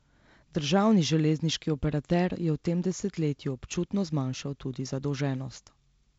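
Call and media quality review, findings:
Nothing to flag here, just G.722 wideband telephone coding doing its usual job, with the speech topping out around 7.7 kHz and a light coding texture that fits a 48 kbit/s setting.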